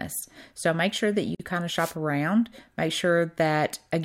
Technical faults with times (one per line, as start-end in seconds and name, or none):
1.35-1.40 gap at a join of encoded pieces
1.75-1.95 wireless microphone noise hit